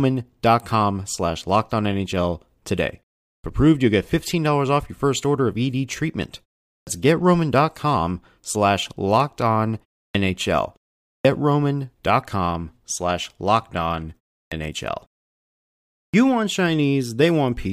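Speech with a clipped start after a pause at 3.37 (before "approved you'll get"), 6.79, 10.08 (after "slash locked on"), 11.18, 14.45 (after "slash locked on") and 16.07 s. After silences of 0.3 to 1.1 s, the output device needs time to wake, losing about 66 to 80 ms of onset. On a waveform or spectrogram, energy appears suddenly at full level, with no soft lead-in.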